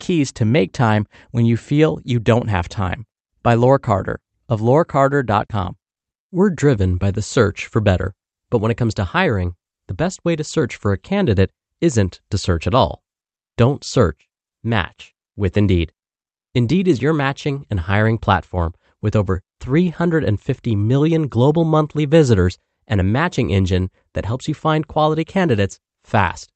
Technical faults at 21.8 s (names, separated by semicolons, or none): none